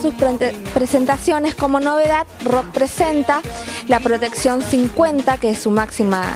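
There are no technical faults in this audio to describe.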